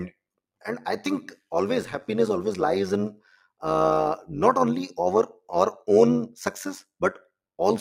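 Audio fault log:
Throughout: overlap-add ripple. The speech rises and falls in level by about 11 dB at a rate of around 100 times a second, giving a metallic buzz with extra tones around the voice over every syllable. The audio was processed in short windowed frames and rejoined with an overlap whose windows do not add up to a steady gain, so the level rises and falls once per frame, repeating at the frame rate.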